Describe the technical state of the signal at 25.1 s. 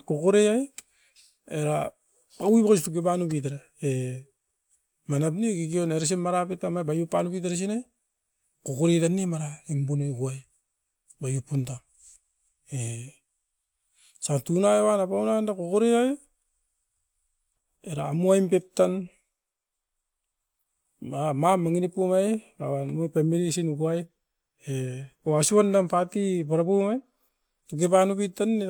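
At 25.1 s the speech signal is intact, with no audible fault at that moment.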